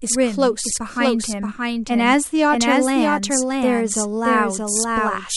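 A second capture path or a misaligned edit has likely laid the speech in twice, producing a doubled audio track. Throughout, a dry, full-band copy trails the original by roughly 0.7 s at about 5 dB lower, with no decay or room colour.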